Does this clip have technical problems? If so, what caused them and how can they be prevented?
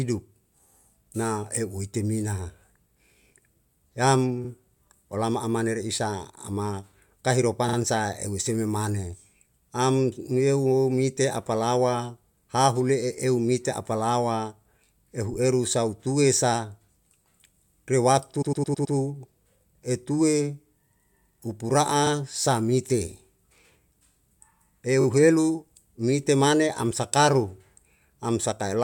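Yes. Runs of compressed frames were delivered more than once, so the decoder replays the same slice of speech, heard as a stutter. A 43 ms block repeats once at 4.44 s and 22.06 s, and twice at 7.68 s. A 21 ms block repeats twice at 25.00 s. The worst, at 18.41 s, replays a 107 ms block five times, adding about half a second. Deduplicating frames by sequence number or timestamp before decoding would prevent this.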